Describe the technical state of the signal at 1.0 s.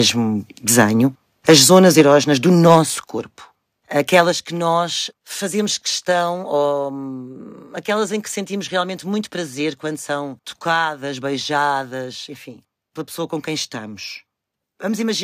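At 1.02 s the microphone volume stepped down: the capture chain most likely judged the input too hot and cut the device's input gain in a single step rather than easing it down. Everything the microphone picks up, the speech and the background alike, drops by about 2 dB at that instant and stays at the lower level, so the sound seems to sink abruptly instead of fading.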